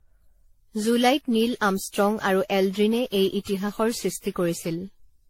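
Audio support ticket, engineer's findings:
Generation loss, whole clip. Swirly, hollow speech with smeared consonant attacks and no content above 16.5 kHz; the sound fits an AAC-LC chain at around 64 kbit/s. Likely cause: repeated decode and re-encode, roughly ten passes, each requantising on a shifted frame grid so noise and spectral holes stack up. Differs from a single low-bitrate encode because the hollowness and smearing go well beyond what 64 kbit/s alone would produce in one pass.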